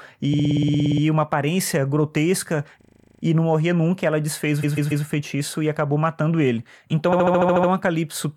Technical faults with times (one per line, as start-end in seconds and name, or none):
0.33-1.02 repeated frames
2.81-3.22 repeated frames
4.62-5.04 repeated frames
7.11-7.69 repeated frames